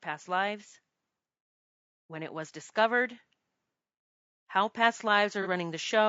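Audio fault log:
throughout: low-delay AAC compression. The encoder, likely AAC-ELD at a rate that fits roughly 32 kbps, works in short frames with a low-delay window, so at this rate it spends its limited bits poorly. The speech comes out plainly rough and grainy, with a hiss-like fill creeping between the harmonics and an upper band that sounds thinned or artificial rather than natural air and sibilance.
4.53 to 6.04 s: automatic gain rising. The gain control judged the input too quiet and began turning it up, raising the level by about 4 dB over roughly a second and a half. Because the whole signal is amplified together, the voice and the background swell as one. The result is a slow, steady push in loudness toward the end of the clip rather than a sudden jump.
5.42 to 5.47 s: AAC frame loss with concealment. A block of coded data failed to arrive, which fits a single lost frame, and the decoder patched the gap by reusing the last good spectrum with randomised detail. 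For about 50 ms the speech loses its definition and turns into a brief smeared, noisy blur. The loss is too short for the fill-in to fade toward silence before normal decoding resumes.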